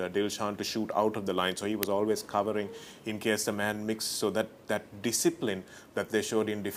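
At 1.83 s the audio is broken by a single click-like burst of harsh digital noise, far louder than the material around it and gone in little more than a millisecond. It is an uninitialised buffer: a block of output was sent to playback before any audio had been written into it, so whatever values were left in that memory were played as samples. The length of about 1.33 ms fits a 64-sample block.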